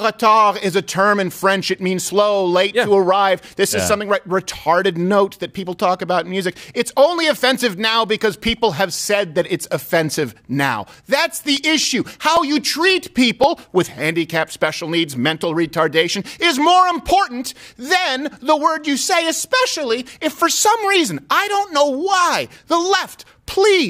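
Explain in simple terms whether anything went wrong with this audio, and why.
Between 11.57 and 13.97 s there is a short run of CD scratch ticks: ten small clicks, about four a second, each lasting no more than a couple of milliseconds. A scratch or mark on the disc spoils a little data every time that spot passes the laser, more than the disc's error correction can repair. The player then patches over or briefly silences those samples, and each patch is heard as a tick in the sound.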